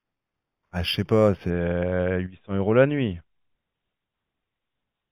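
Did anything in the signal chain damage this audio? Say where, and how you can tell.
Yes. Imaging from linear upsampling affects the opening, from 0.0 to 1.5 s, at the sample-rate conversion stage. The rate was raised by straight-line interpolation, a poor anti-imaging filter. The top of the band sounds dulled, and a faint mirror image of the speech spectrum sits in the 4 to 8 kHz region, roughly 20 dB below the signal, adding a light metallic shimmer to sibilants. That pattern fits an 8 kHz source converted up to 44.1 kHz.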